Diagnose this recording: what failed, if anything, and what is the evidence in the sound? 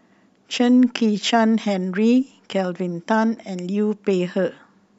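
No failure found in this recording.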